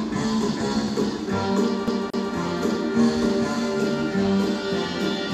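A quick double stutter from 1.87 to 2.33 s repeats the same 227 ms slice of sound twice: a CD stuck on one turn, its laser jumping back a track each rotation.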